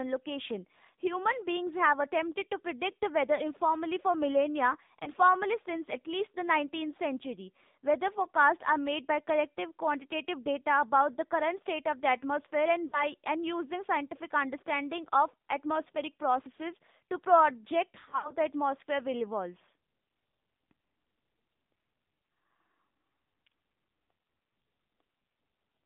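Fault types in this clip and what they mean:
AMR narrowband mobile codec: Present throughout, this mobile speech codec rebuilds the voice from a vocal-tract model excited by a few pulses per short subframe, so nothing survives outside a line band of roughly 150 Hz to 3.7 kHz. The clip sounds plainly buzzy and synthetic, with a thin, boxed-in quality and no air above 4 kHz. That degree of coarseness fits a low bitrate around 7.4 kbps.
lost AMR speech frames: Dropouts fall at 3.36–3.42 s, 5.04–5.10 s, 12.88–13.04 s and 18.00–18.34 s. Each time, corrupted frames were discarded and the decoder filled the gap by repeating its last good pitch and vocal-tract settings at falling gain. The first two cover about 20 ms each and come across as brief warbling dips. The third covers about 40 ms. The last scatters 140 ms of losses over 240 ms, with runs up to 60 ms, giving a drawn-out, fading smear.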